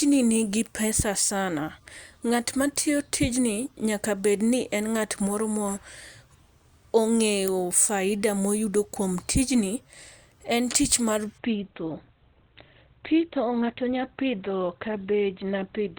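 From 11.38 s, after "en tich mar", the speech abruptly loses everything above 4.2 kHz and turns dull and synthetic, with no gap, until the end. This is an adaptive stream at a lower bitrate: a slowed connection forced a leaner encoding, which fits Opus dropping from about 64 to 12 kbit/s.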